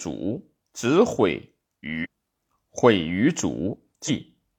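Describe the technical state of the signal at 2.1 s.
Damaged data in a compressed stream ends just before, spanning 2.00 to 2.07 s. Corrupted frames throw the decoder out of sync, producing a brief glitch.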